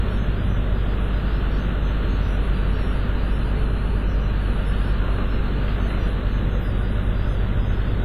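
Sounds, ringing and washy throughout with a hiss that breathes along with them, likely WMA compression at a low bitrate near 24 kbps; a spectrogram shows a hard ceiling at 15 kHz, smeared onsets and gappy, zeroed detail.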